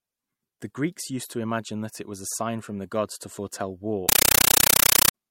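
A compressed stream played as audio runs from 4.09 to 5.14 s in this speech clip, right after "gods to foretell war". An undecoded AC-3 bitstream, which fits a 448 kbps stream, is rendered as samples, giving very loud chattering static: 9.33 ms noise bursts repeating 31.25 times a second.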